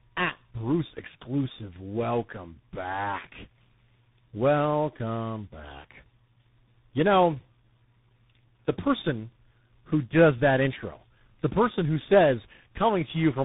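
Tandem speech coding runs throughout: the speech passed through about four separate speech codecs in a row, each recoding the last one's damage, leaving it rough, warbly and muffled, with nothing above 3.8 kHz.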